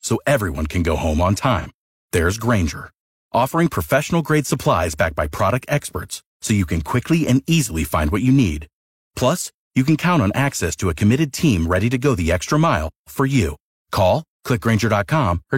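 A speech clip with one brief AAC frame loss with concealment, from 1.59 to 1.67 s, right after "can go home on". The sound there turns smeared and noisy and phasey instead of going silent, with a gap that fits a single lost frame of about 43 ms. The decoder filled it in from the previous good spectrum. A plain dropout would leave hard silence, and this loss was too short to fade out.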